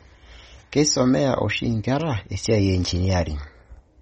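Across the whole recording the speech sounds watery and swirly, with sibilants turning metallic and chirpy, and consonant attacks smeared rather than crisp. Nothing remains above about 8.4 kHz, so the top end is dull. These traits point to MP3 compression, likely at a low bitrate that fits around 32 kbps: the encoder cut the treble at a fixed point and dropped weak spectral lines, which flicker on and off between frames and cause the swirling texture.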